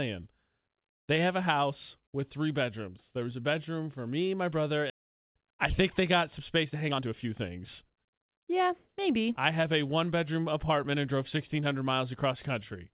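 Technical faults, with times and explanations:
4.9 s, skip ahead: right after "for me my brother" the speech lurches forward with no gap, as about a second and a half of audio is dropped and the two sides are spliced almost directly. Unlike a dropout, nothing is silenced or filled; the missing stretch simply never plays.
5.00 to 8.68 s, jitter buffer speed-up: up to "maybe I have a" the talker sounds hurried, running at about 112 percent speed with unchanged pitch, because the receiver repeatedly trims short pitch-period slices to shed roughly 400 ms of excess buffered delay. Unlike a skip, content stays intact.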